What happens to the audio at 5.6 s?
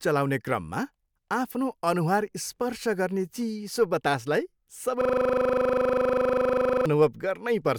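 At 5.6 s you're right in the middle of a system hang loop, which runs from about 5.01 s to 6.86 s. The machine or its driver stalled while the audio hardware kept replaying the same stretch of its ring buffer, so one 40 ms slice of the speech repeats exactly, 46 times in a row. At a 25 Hz repeat rate, that comes across as a rough, rapid stutter verging on a buzz, with the speech frozen in place until it releases.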